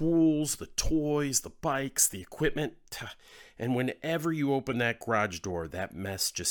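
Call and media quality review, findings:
No faults found in this call and media quality review.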